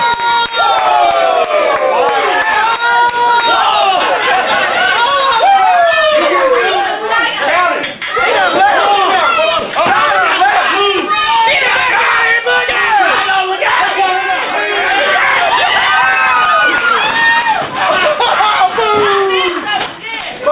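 Nothing here goes wrong at any point, so there's no technical fault to point to anywhere in the audio.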